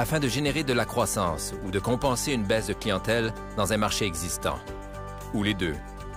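No technical faults can be heard anywhere in this audio. There are no moments of disruption to place in time.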